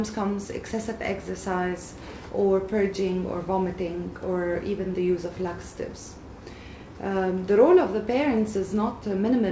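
No technical faults can be heard; the signal shows only the expected effects of its call path, with nothing above 8 kHz, which fits the G.722 wideband codec at 64 kbps.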